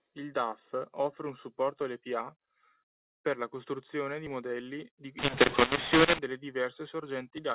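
From 5.19 to 6.19 s, mu-law coded audio is decoded as A-law. The levels scramble, so the speech turns harsh and the pauses fill with noise. Unlike clipping, even the quiet stretches distort.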